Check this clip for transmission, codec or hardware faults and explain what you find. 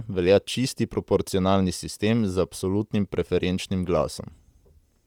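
The speech carries one codec fault, present from start to finish.

Bluetooth LC3 compression, throughout: the sound likely passed through LE Audio's LC3 codec, which fits a 48 kbps stream in 10 ms frames. Starved upper bands are zeroed and refilled with noise, leaving a plainly audible breathy, grainy edge on the speech.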